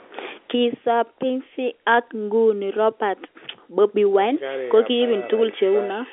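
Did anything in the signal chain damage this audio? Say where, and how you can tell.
No, nothing in the signal chain damaged this audio; it carries the ordinary narrow band of a G.711 telephone line, with nothing above 3.7 kHz.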